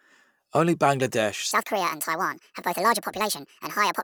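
A likely clock mismatch plays the section after 1.51 s at the wrong speed, 1.65 times fast, so speech turns hurried and about ten semitones higher.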